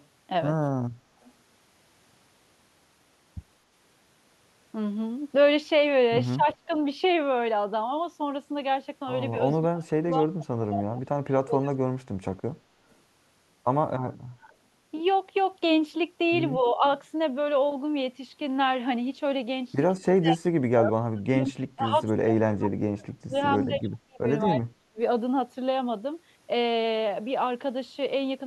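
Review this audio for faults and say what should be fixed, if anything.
Echo leak appears at 0.0 to 0.06 s, 1.21 to 1.3 s and 12.9 to 12.95 s: brief, faint copies of the speech trailing by 220 ms, roughly 30 to 40 dB below it. The likely cause is a far-end loudspeaker whose echo canceller let residual pickup return down the line. Prevent it by improving far-end echo cancellation or using a headset.

Speech suppressed in double talk occurs at 6.36 to 6.7 s, 9.61 to 11.72 s, 14.37 to 14.52 s, 16.57 to 16.83 s and 19.98 to 24.99 s. The speech dips by a few decibels to roughly 35 dB, most severely in the two longest spans, which total about two and four seconds. This is likely an echo canceller muting near-end speech during overlap. Prevent it with a canceller whose double-talk detection keeps the near-end path open.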